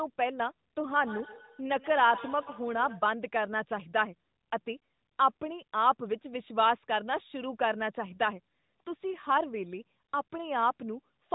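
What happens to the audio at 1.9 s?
Feedback echo between two devices runs from 0.89 to 3.16 s, spanning about 2.3 s. A second device replays the call, its microphone captures it again, and neither echo canceller removes the other's output, so the speech returns roughly every 150 ms, thin and ringing, peaking about 15 dB below it.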